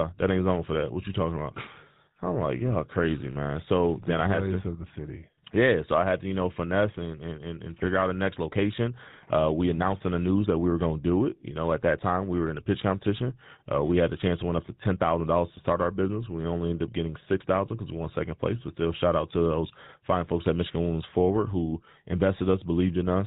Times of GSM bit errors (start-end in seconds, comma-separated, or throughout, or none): 7.78-7.87, 14.12-14.18, 17.31-17.35